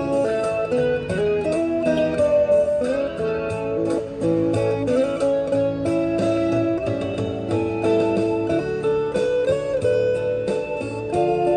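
A brief glitch cuts through the sound at 1.44 s and again at 3.76 s. Both come from damaged data in a compressed stream: corrupted bytes make the decoder misread those frames and lose sync, then recover at the next valid frame header.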